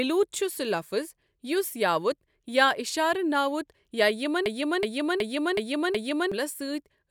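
A system hang loop hits this speech clip from 4.46 to 6.32 s: the system froze while the audio hardware kept replaying its ring buffer, so one 0.37 s chunk repeats five times, which fits a 16384-sample buffer, with roughly two seconds lost.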